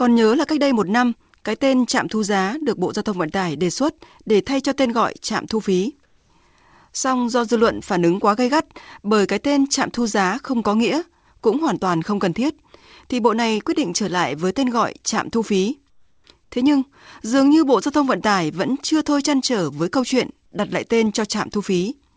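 A sender likely switched to discontinuous transmission during pauses, so the receiver filled them with comfort noise in place of the background: flat synthetic hiss at 6.06–6.30 s (about 2 dB quieter), 15.90–16.24 s (about 5 dB quieter) and 16.44–16.52 s (about 4 dB louder).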